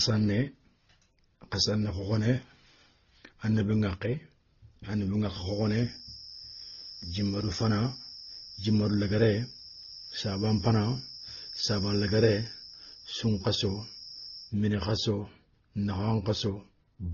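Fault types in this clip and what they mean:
Transcoding between lossy codecs, throughout: the speech carries two layers of coding artefacts and nothing above 6.7 kHz. This fits an MP3 at about 24 kbit/s likely re-encoded to Opus at a similar rate, with the second codec wasting bits on the first one's damage.
Feedback whistle, 5.32 to 14.56 s: a thin, steady tone at 5.4 kHz sits roughly 20 dB under the speech, swelling and fading slowly in level. It starts just before "mini khasso", likely from a loudspeaker-to-microphone loop held right at the edge of feedback.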